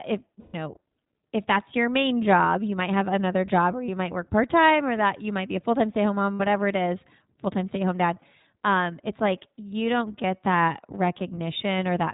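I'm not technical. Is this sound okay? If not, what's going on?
No. The whole clip passes through the iLBC codec, a narrowband phone codec that cuts everything above 4 kHz, so the speech sounds muffled, rough and somewhat synthetic.

There are also lost iLBC frames at 0.40–0.55 s, 6.34–6.42 s (between "home mom" and "it is stay") and 8.20–8.24 s. During each one, the decoder filled the gap by repeating a held, buzzy sound.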